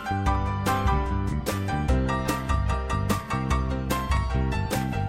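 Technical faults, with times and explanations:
0.35 to 4.17 s, clock drift buffer slips: about four clicks every 1.27 s, likely two clocks around 150 ppm apart, dropping or repeating a few samples.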